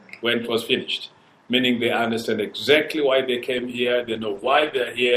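From 3.59 s to the end there's a call bitrate drop: the audio turns rough and muffled, highs gone, which fits the encoder falling from around 64 to 12 kbps.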